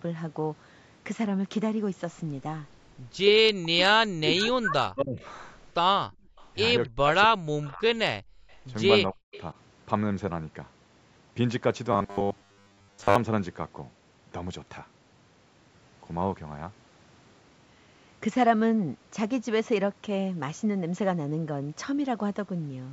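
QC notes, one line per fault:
3.61–5.24, 6.86–7.87 and 9.1–9.34 s: speech suppressed in double talk. The talker dips by around 40 dB, likely from the echo canceller ducking during overlap.
6.09–6.37 and 8.22–8.50 s: background gated by the echo canceller. The room sound drops by about 38 to 40 dB, then recovers. The spectrogram shows a blank band across all frequencies.
6.37–6.47 and 7.63–9.43 s: echo leak. A faint copy arrives 270 ms late, roughly 25 to 35 dB under the speech, likely residual loudspeaker echo. The spectrogram shows a weak, delayed formant shadow.
11.93–13.16 s: robotic sound from repeated short buffers. About 70% of the audio is repeated, likely 10 ms buffer repeats, imposing a 100 Hz metallic buzz. The spectrogram shows rigid, evenly spaced harmonic stripes.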